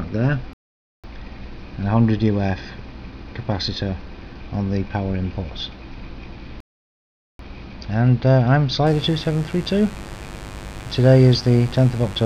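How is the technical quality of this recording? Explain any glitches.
Not great, to be honest. There are two dropouts and a buzz that runs through the last few seconds.

The two gaps are playback stalls. The sound cuts out in mid-flow from 0.53 to 1.04 s, about half a second, and again from 6.60 to 7.39 s, nearly 0.8 s, then carries on. That pattern most likely comes from the player running dry of data or having its thread blocked, so nothing reaches the output until it catches up.

From 8.87 s to the end there's mains buzz, a steady, raspy drone sitting roughly 15 dB under the main sound. It's built on 50 Hz, but sharp switching spikes, twice per mains cycle from something like a dimmer, rectifier or unshielded run, spray harmonics up into the kilohertz range. That's why it sounds gritty rather than like a clean low hum.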